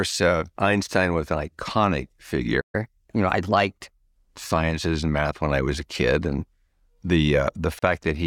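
Playback stall at 2.60 to 2.75 s: the speech cuts to silence for about 130 ms, likely because the player ran short of data or its thread was blocked. Catch-up at higher speed follows from 2.75 to 4.05 s, as the player resamples its backlog at 1.1 times speed, lifting pitch roughly a semitone and a half before settling. Gap at a join of encoded pieces at 7.79 to 7.82 s: a 35 ms silence with smeared edges, left by encoder delay and end padding, before the speech resumes.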